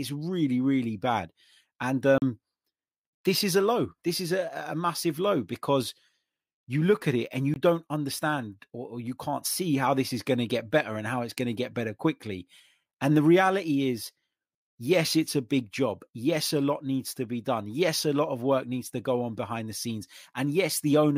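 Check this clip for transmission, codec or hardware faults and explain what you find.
Two short dropouts in the speech, both a block of digital silence: 2.18 to 2.22 s (40 ms) and 7.54 to 7.56 s (20 ms). The audio cuts straight to silence and comes back with no fade, and you hear a brief hole.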